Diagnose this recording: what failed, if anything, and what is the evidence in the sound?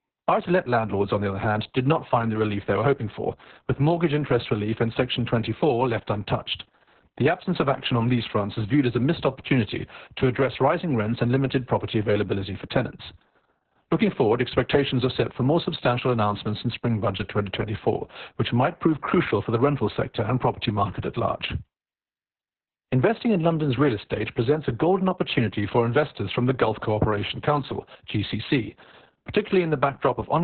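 Muffled, hoarse and faintly robotic speech across the whole clip, with nothing above roughly 4 kHz, points to heavy Opus voice compression at the codec stage. The narrowband SILK mode codes the excitation coarsely, which fits a bitrate near 6 kbps and long 60 ms frames.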